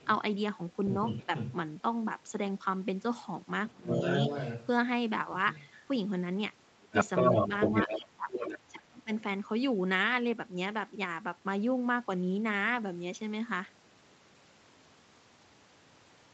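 The other side's voice leaking through shows up first at 0.00 to 0.07 s, very faint, far below the talker. The likely cause is residual echo. The far side plays on a loudspeaker, and the echo canceller leaves part of it in the microphone signal. It returns from 1.05 to 1.53 s, only about 5 dB under the talker.

Inside that stretch, at 1.24 to 1.31 s, the talker's speech is suppressed in double talk. It dips by about 10 dB. Both sides are speaking at once. The likely cause is the canceller failing to tell its own talker from the echo, so it turns both down.

From 3.67 to 5.76 s the leaking voice is about as loud as the talker. At 3.74 to 3.87 s the talker drops by about 20 dB.

The worst stretch runs from 6.77 to 9.10 s. The talker is pushed down by up to about 30 dB, in pieces adding up to about a second. Meanwhile, from 6.91 to 8.59 s, the other side comes through about 5 dB louder than the talker.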